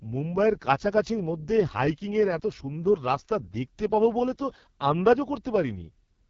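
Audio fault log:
Throughout, AMR wideband (HD Voice) codec: the speech has the rough, raspy grain of heavy low-rate coding, which fits the lowest 6.6 kbit/s mode. At that rate the pulse-driven vocal tract model gets too few bits to track the voice closely, so detail below 6.4 kHz turns coarse and buzzy. Above that, the top band is synthesised noise rather than real signal, and nothing is present above 7.2 kHz.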